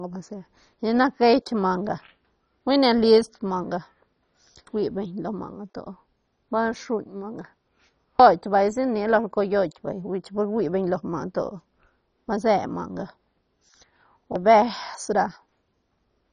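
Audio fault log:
throughout, MP2 compression: the speech was likely passed through an MPEG Layer II encoder starved of bits, in line with a rate near 32 kbps. Upper sub-bands are switched off, leaving nothing above 10.3 kHz, and coarse quantisation of the remaining bands makes it dull, gurgling and granular.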